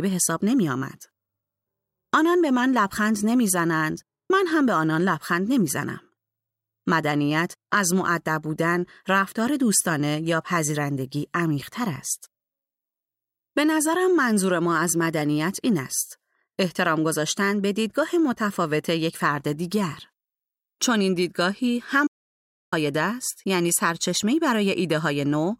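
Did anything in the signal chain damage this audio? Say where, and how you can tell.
Yes. An audio dropout to silence cuts the speech at 22.07 s, and it returns at 22.72 s, leaving about 0.65 s of silence rather than quiet room tone. On the waveform the trace collapses to a flat line with abrupt edges, and on a spectrogram it is a fully black vertical band across all frequencies. The cause is likely at the input or interface stage, a momentary loss of signal while the recorder kept writing silence.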